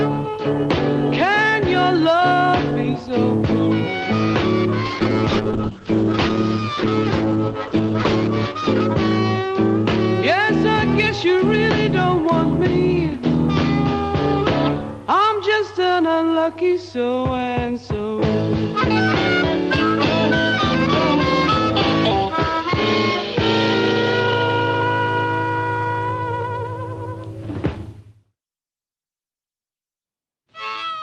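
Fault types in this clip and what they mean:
Call bitrate drop: from 4.86 to 9.91 s, the encoder falls from 32 to 10 kbps and codes coarsely. The spectrogram loses everything above 8 kHz until it recovers.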